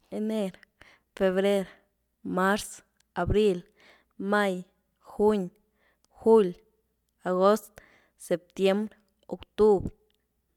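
No technical faults can be heard anywhere in the recording. Nothing in the signal chain interrupts or disturbs the speech at any point.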